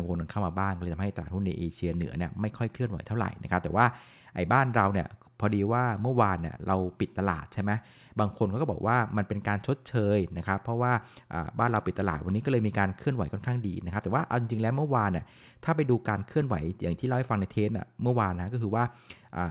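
No technical faults can be heard in the speech, which arrives through a narrowband call path with nothing above 4 kHz, as fits G.711 mu-law coding at 64 kbps.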